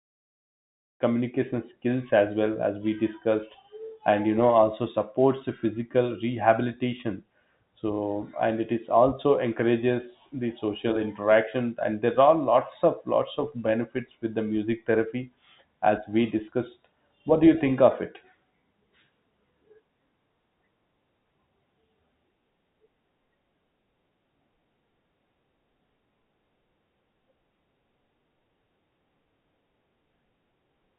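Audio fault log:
No fault to log.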